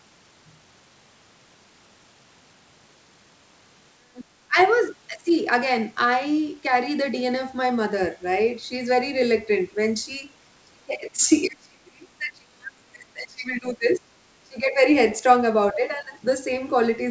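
The speech dips or cuts out in pieces at 4.13–4.58 s, 11.13–11.3 s, 11.47–14.03 s, 14.42–14.8 s and 15.72–16.17 s, sinking by about 40 dB at worst, which is likely speech suppressed in double talk, with the echo canceller ducking the talker while the far end also spoke. Faint scraps of a second voice surface at 4.63–4.7 s and 13.91–13.98 s, well below the talker, most likely the other side's voice leaking through from a loudspeaker the canceller did not fully remove. The audio stops at 8 kHz, as expected for a wideband call path.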